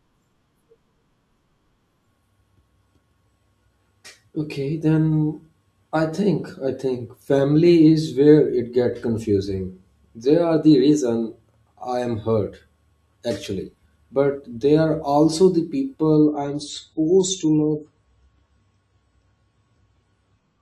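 A speech clip whose last stretch, from 16.16 s to the end at 20.62 s, right after "they are also the", shifts abruptly to an adaptive stream at a lower bitrate. Treble vanishes above 9.9 kHz and codec artefacts thicken, with no gap at the switch, which fits an AAC stream stepping down from around 96 to 24 kbit/s. On a spectrogram the upper band ends in a sharp horizontal ceiling from that point; the waveform stays continuous.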